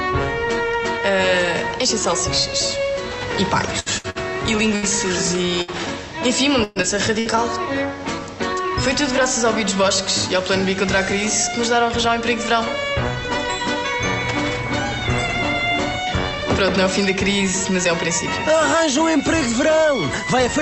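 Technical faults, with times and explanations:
3.79–5.71 s, repeated packet loss (robotic sound): the audio turns choppy and robotic, with six short dropouts and the longest hole about 65 ms. Lost or late packets were each patched by stretching the last bit of sound, covering roughly a sixth of this span, so the smeared, buzzy repeats alternate with missing pieces.
6.64–7.35 s, repeated packet loss (robotic sound): a denser burst of four dropouts, one of them 120 ms long. Concealment fills nearly a third of the stretch, so the sound is choppy and robotic, with pieces missing.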